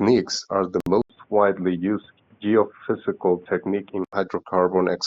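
Just after "are the", at 0.80 s, the sound drops to silence for about 60 ms and resumes at 0.87 s. This is likely a Bluetooth stall: delayed packets emptied the headphones' buffer, so playback paused until the resent audio arrived.

At 1.02 s the sound turns dull and boxy, with nothing above 3.6 kHz, until it clears at 4.13 s. An 80 ms silence marks the change, the level stays about the same, and a new noise floor sits roughly 40 dB below the speech. This is likely the input switched to a poorer device with a narrower band.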